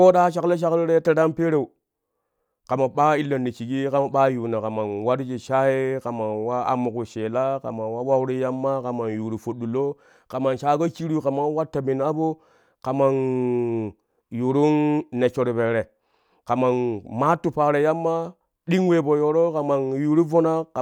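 Nothing in the recording stood out as a technical fault on listening.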